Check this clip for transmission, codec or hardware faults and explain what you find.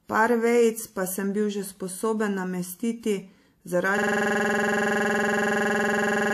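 One hardware fault is present. A system hang loop runs from 3.98 s to the end: the system froze while the audio device kept replaying one 46 ms buffer, which fits a 2048-sample ring buffer, about fifty times, giving a 21.5 Hz machine-gun stutter.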